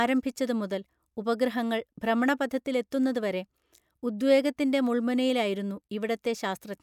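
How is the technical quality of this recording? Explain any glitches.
No glitches can be heard anywhere in the recording, and the signal stays continuous and intact throughout.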